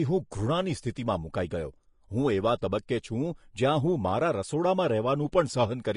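Speech with plainly audible Vorbis compression throughout, likely low-bitrate encoding around 35 kbps: hissy, grainy treble, and a spectrogram showing nothing above 10.5 kHz.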